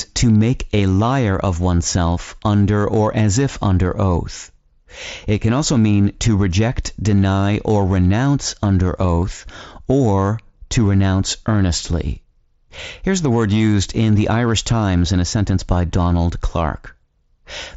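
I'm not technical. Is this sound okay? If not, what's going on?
No, not quite. There are three tiny blips of concealed Bluetooth headset packet loss at 0.78, 9.21 and 13.59 seconds, where missing audio was briefly patched over.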